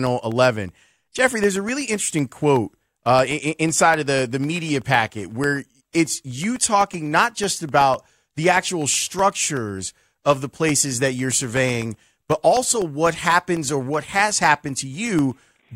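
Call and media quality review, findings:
Periodic USB or driver dropouts, 0.07 to 15.69 s. Regular ticks every 0.125 s under speech. Roughly half a millisecond silenced each time. Likely bus or driver stall.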